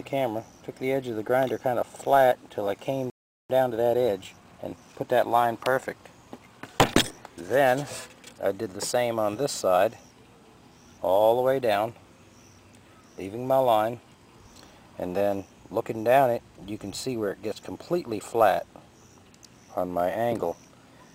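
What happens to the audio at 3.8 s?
At 3.8 s the audio is inside a time-compressed catch-up that runs from 3.50 s to 5.08 s. After a stall, the player works through its backlog by cutting out small slices and cross-fading the joins, so this stretch plays at 1.25 times normal speed. It sounds hurried. Unlike a plain speed-up or resampling error, the pitch stays where it belongs rather than rising.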